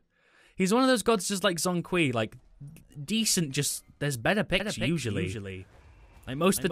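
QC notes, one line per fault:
4.60 s to end: doubled audio track. From 4.60 s a second full-band copy of the sound runs roughly a third of a second behind the original, a few dB quieter, and it switches on abruptly and stays to the end. Unlike an echo or reverb, there is just one repeat at a fixed delay, with no decay and no room colouring. This most likely comes from the sound being captured again by a slower path.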